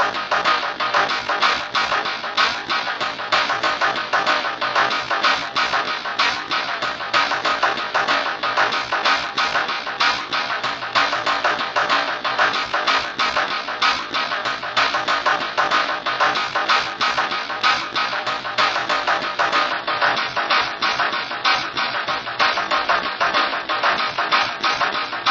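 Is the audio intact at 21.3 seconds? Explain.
No. At 21.3 seconds the audio sits inside a drop to a lower adaptive-stream bitrate, running from 19.72 s to the end. The stream switches abruptly, without a gap, from what sounds like 128 kbit/s MP3 to roughly 32 kbit/s, so everything above 7.1 kHz vanishes and codec artefacts thicken.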